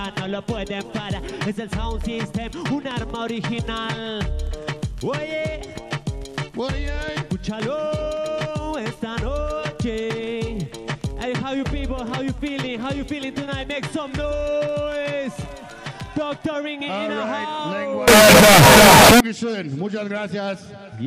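Signed and unsigned mixed up, from 18.08 to 19.20 s: the sound turns into a very loud, harsh distortion in which quiet moments are as loud as everything else. The likely cause is 16-bit samples read with the wrong sign convention, flipping the top bit so every zero crossing leaps across the full range.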